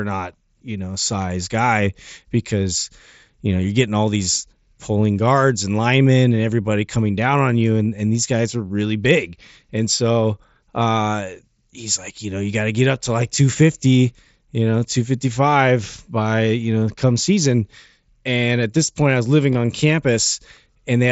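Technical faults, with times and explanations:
19.53 s, concealed Bluetooth headset packet loss: about 15 ms of speech is lost between headset and phone, which fits a couple of dropped packets, and the receiver fills the gap by repeating the best-matching stretch of waveform just before it. Because the gap is so brief, it is nearly hidden. The waveform shows a copied cycle with small seams at each end. The spectrogram shows a short smeared band capped near 8 kHz, the mSBC wideband limit.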